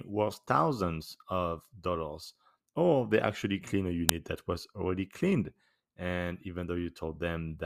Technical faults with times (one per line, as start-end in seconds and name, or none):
4.09 uninitialised buffer